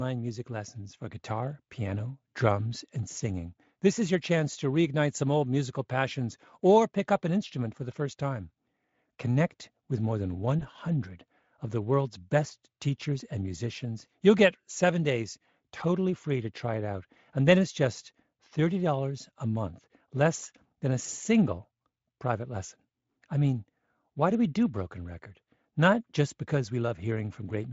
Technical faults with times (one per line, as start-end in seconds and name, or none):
3.11-3.16 VoIP packet loss concealed by the speech codec
10.59-10.66 VoIP packet loss concealed by the speech codec